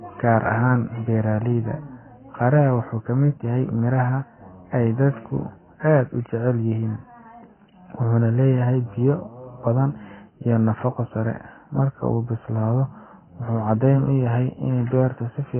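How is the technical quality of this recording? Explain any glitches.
Technical quality is poor: heavy low-bitrate coding damage runs through the whole speech clip. AAC compression, present throughout, is the likely cause. The encoder appears to have been starved of bits, which fits a bitrate around 12 kbps, so it discarded everything above 3.1 kHz and coarsely quantised what remained. The speech therefore sounds dull and muffled, with sibilants losing their edge and a smeared, warbling texture on sustained sounds.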